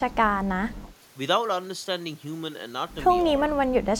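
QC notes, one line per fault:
0.02–0.75 s, speech suppressed in double talk: the echo canceller was likely caught with both ends talking at once and, unable to tell this talker from the loudspeaker echo, pulled the level down on everything. The speech sinks by about 20 dB at its deepest, affected for roughly half a second.
3.23–3.37 s, speech suppressed in double talk: the same clamp likely returns briefly, a shallow dip of only a few dB lasting under a tenth of a second.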